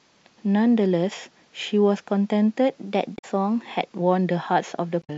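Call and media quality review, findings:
Drift correction step, 2.75 to 4.01 s: speech plays about 5.7% fast, pitch raised about 97 cents, close to a semitone, then snaps back at 4.01 s. Likely a clock-sync resampler in the playback path stepping its rate to drain buffer backlog, shifting speed and pitch together instead of stretching time.

Damaged data in a compressed stream, 3.15 to 3.25 s: short glitch inside the sped-up stretch. Corrupted frames misread by decoder, sync lost, hunt for next frame header.

Damaged data in a compressed stream, 5.00 to 5.10 s: similar glitch near clip end. Same decoder resync behaviour after bad bytes, brief blip.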